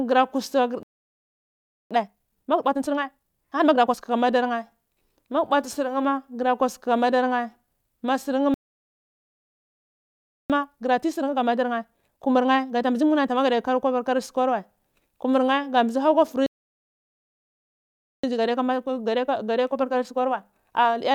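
At 0.83 s the speech cuts out in a playback stall lasting about 1.08 s, likely because the player ran dry of buffered data. The waveform shows a flat line and the spectrogram a blank vertical band until 1.91 s. When sound returns at 1.91 s, a time-compressed catch-up runs to 4.05 s at 1.5 times normal speed. Small slices are dropped and cross-faded so the backlog shrinks while pitch stays put. The speech sounds hurried, and the spectrogram shows harmonics at their usual heights but syllables packed closer together. The same pattern repeats. A second stall from 8.54 to 10.50 s, about 1.96 s, leaves another empty gap. It is followed by catch-up at 1.25 times speed until 13.50 s. A third stall runs from 16.46 to 18.24 s, about 1.77 s. Then catch-up at 1.15 times speed continues to the end of the clip, milder but still slightly rushed.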